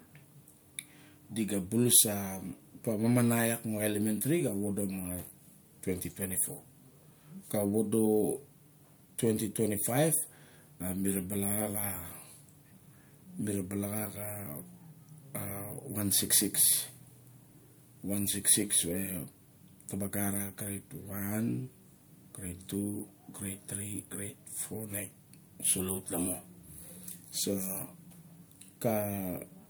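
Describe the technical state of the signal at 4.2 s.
At 4.2 s the speech signal is intact, with no audible fault present at that moment.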